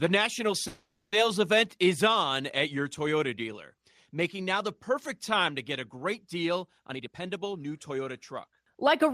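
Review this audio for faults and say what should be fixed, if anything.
From 0.67 to 1.14 s there is a call audio freeze: the last sound is stretched into a fading buzz, ending in about 0.14 s of silence. Playback then resumes just before "event is on at" with nothing lost, so a 450 ms gap is inserted and latency grows by 450 ms. The likely cause is packets held up in transit, leaving the jitter buffer empty. A somewhat deeper adaptive jitter buffer target would ride out a stall of this length.

From 6.90 to 9.11 s, after "get a great deal", a jitter buffer speed-up runs the sound at 116% speed with unchanged pitch. The receiver repeatedly cut pitch-period-length pieces, roughly 0.4 s in total, to drain excess buffered delay. Spreading the catch-up over a longer span at a gentler rate would make the hurried pace far less noticeable.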